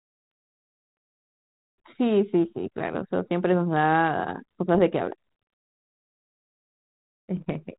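At 2.45 to 2.50 s and again at 4.75 to 4.79 s the speech breaks into a short pop with a rough, gritty edge, and a longer burst runs from 7.37 to 7.51 s. These are bit errors on an ADPCM link: a sparse sprinkling of flipped bits, roughly one in a thousand, throws the decoder's step size and prediction off, so each hit rings on briefly with a jump in level. The band-limited coding underneath fits a 32 kbit/s G.726 link.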